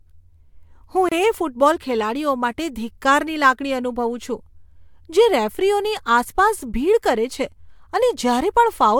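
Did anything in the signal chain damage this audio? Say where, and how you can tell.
Yes. At 1.09 s the speech drops out for about 29 ms and resumes at 1.12 s exactly where it left off, a gap at a join of encoded pieces. The damage happened at the codec stage: the audio was encoded in separate pieces and spliced without trimming the encoder's start-up delay and final-frame padding. On a waveform this shows as a short near-silent notch with smeared edges. A spectrogram shows a narrow vertical blank band, its borders slightly smeared by the codec.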